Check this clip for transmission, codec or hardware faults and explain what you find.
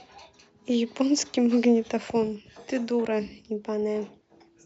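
No transmission, codec or hardware fault can be heard in this speech recording; the signal stays continuous and stable throughout.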